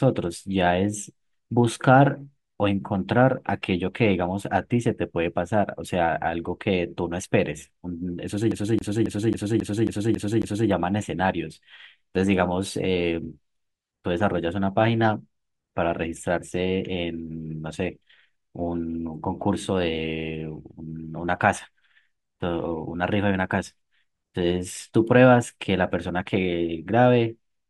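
From 8.51 to 10.69 s, a 0.27 s snippet repeats eight times in a fast, even stutter: the CD stuck on one turn, a scratch throwing the laser back a track.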